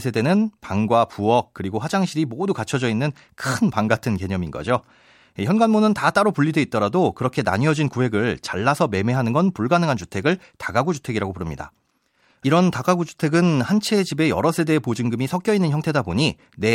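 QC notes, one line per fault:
Nothing stood out on listening to the speech in this clip.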